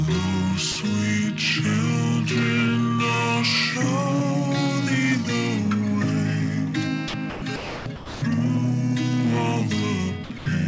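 Hard clipping runs throughout: the signal is driven about 7 dB past full scale, so a few percent of peaks are flattened, adding crackle and harsh upper harmonics. Sound is dropped by the voice detector at 0.72–0.76 s, 7.08–7.14 s, 7.30–7.42 s, 7.56–7.86 s, 7.96–8.22 s, 10.24–10.30 s and 10.38–10.46 s, where steady noise briefly replaces the audio, likely comfort noise inserted after the sender's detector judged it background.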